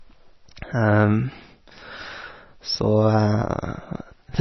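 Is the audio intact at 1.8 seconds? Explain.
No, MP3 compression runs through the whole clip, so 1.8 s carries it too. The speech has nothing above 6 kHz, a hard treble ceiling, and its heavy watery, swirling texture fits a starved bitrate around 24 kbps. The likely cause is an encoder short of bits: it cut the top band at a fixed frequency and zeroed weak frequency lines, which flicker on and off between frames, blurring consonants and smearing attacks.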